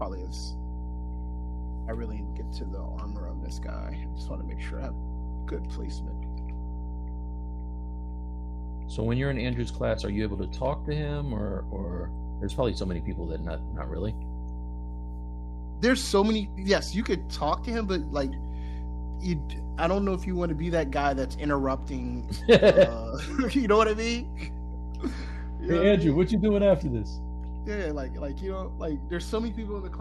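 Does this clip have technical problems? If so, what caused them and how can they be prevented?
Yes, mains hum runs throughout: a steady 60 Hz tone nearly as loud as the sound, leaking in through a ground loop or nearby transformer. On a spectrogram it is an unbroken horizontal line at 60 Hz, and on the waveform a constant low ripple. Prevent it with balanced cabling, a single common ground point, and distance from power supplies.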